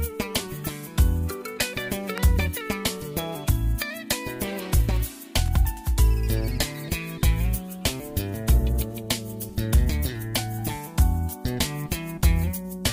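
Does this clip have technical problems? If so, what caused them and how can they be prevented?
Yes. Electrical switching spikes occur at 2.18 s, a sharp, fairly loud snap, and from 5.46 to 5.48 s, a quieter tight cluster of clicks. Both are likely arcs from a nearby switch, motor or static discharge that the audio line picked up. Keeping cables away from switching equipment and using shielded, balanced lines prevents this.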